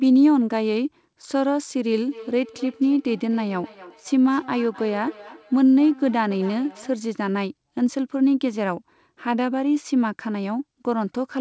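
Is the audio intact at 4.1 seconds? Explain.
No. Feedback echo between two devices runs from 2.07 to 7.05 s. A second device replays the call, the first device's microphone picks that up again, and neither echo canceller removes it, so speech returns roughly every 300 ms, thin and ringing, at most about 21 dB below the speech.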